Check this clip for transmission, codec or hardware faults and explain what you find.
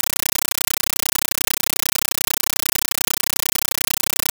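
A compressed stream is being played as audio, throughout the clip. The undecoded Dolby Digital data, consistent with a 448 kbps AC-3 stream, is treated as samples, giving roughly 9.33 ms noise bursts 31.25 times a second: loud chattering static in place of the speech.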